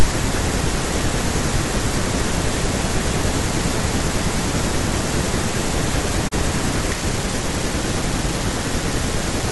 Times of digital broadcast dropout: 6.27-6.33

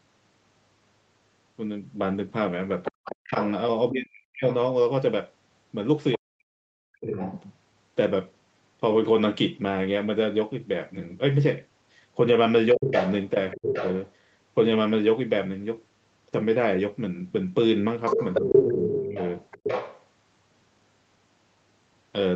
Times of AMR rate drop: none

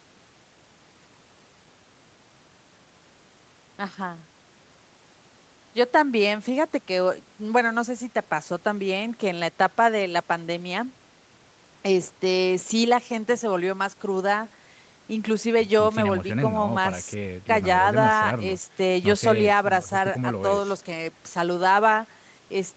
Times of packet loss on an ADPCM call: none

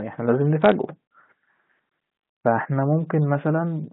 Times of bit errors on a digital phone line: 0.62-0.72

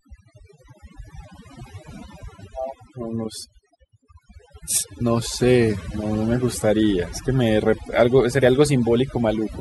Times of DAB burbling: none

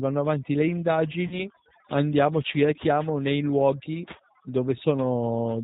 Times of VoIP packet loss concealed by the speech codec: 1.27-1.46

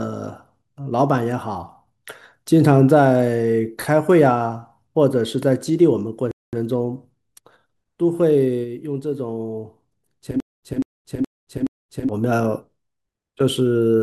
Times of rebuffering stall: 6.31-6.53

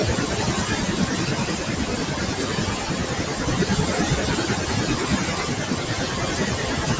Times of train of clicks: none

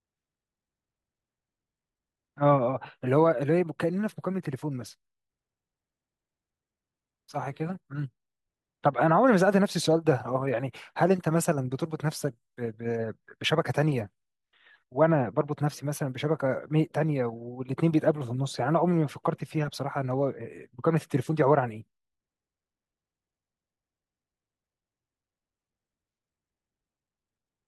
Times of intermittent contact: none

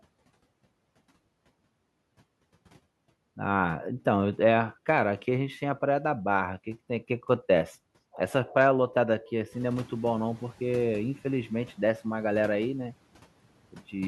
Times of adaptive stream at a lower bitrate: none

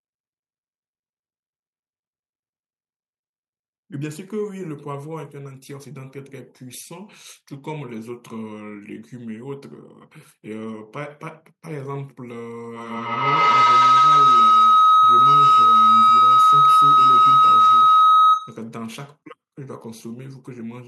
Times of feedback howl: 12.76-18.69

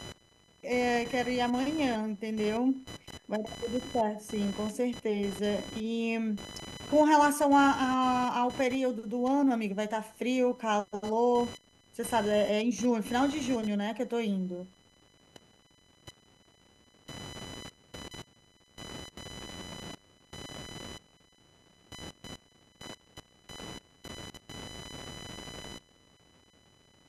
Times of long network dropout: none

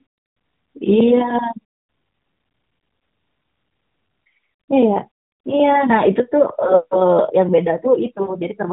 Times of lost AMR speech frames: 8.22-8.37

